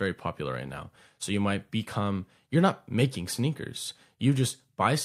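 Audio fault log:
The speech signal shows no detectable technical faults anywhere in the clip.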